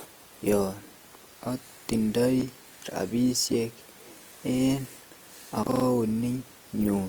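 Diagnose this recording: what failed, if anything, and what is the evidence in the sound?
Throughout the speech the tone is grainy and rough, with a noisy fizz over the upper band, though the audio still extends to about 20.2 kHz. This is likely Opus compression in its CELT music mode at a low rate, around 24 kbps, filling starved bands with folded or noise-like energy.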